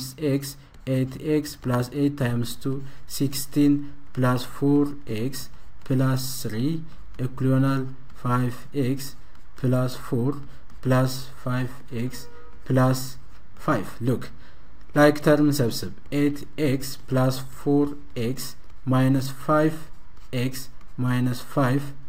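A DC step at 2.30 s shifts the audio's zero line by about -30 dBFS, heard as a single low thump; the offset then holds to the end.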